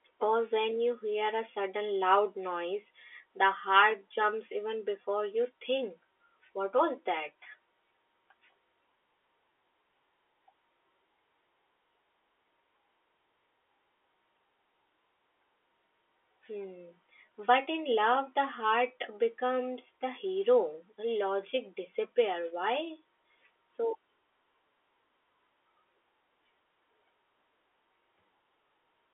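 No technical faults occur in this speech clip, so there is nothing to describe in time order.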